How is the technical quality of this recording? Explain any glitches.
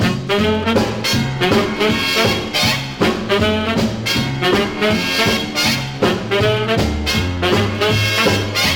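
No glitches or technical faults can be heard here.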